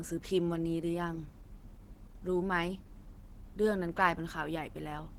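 Speech runs through plainly audible Opus compression from start to finish. The voice sounds hoarse and muffled, with a grainy, rough edge. High frequencies are still present, reaching about 20.1 kHz, so the damage is in texture, not bandwidth. The encoder likely worked at a low bitrate, around 16 kbps, and in its hybrid speech mode. That mode models the voice coarsely and fills the upper bands with folded or noise-like content, leaving this hoarse, grainy character.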